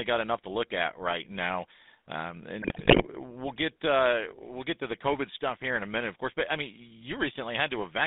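Speech, and the whole thing has that GSM full-rate codec sound: a buzzy, gravelly roughness from the pulse-driven vocal-tract model, squeezed into roughly 200 Hz to 3.7 kHz, which fits the old 13 kbps phone codec. The damage is plainly audible all the way through. Then from 2.62 to 3.07 s you get GSM bit errors. Corrupted filter, pitch and gain values reach the decoder frame after frame, so the sound breaks into squawks, pops and gargling. That points to a badly degraded radio link, with a few percent of bits flipped.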